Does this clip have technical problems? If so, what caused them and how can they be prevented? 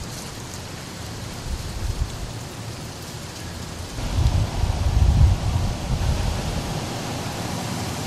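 Yes. A second copy of the audio, likely captured again through a slower path or left out of step in an edit, is mixed in from 6.02 s to the end. This doubled audio track follows about a fifth of a second behind at roughly the same level. It starts abruptly and sounds like a dry, flat repeat with no room decay. Prevent it by muting duplicate inputs and monitor returns, and by checking edits for stacked, offset copies before export.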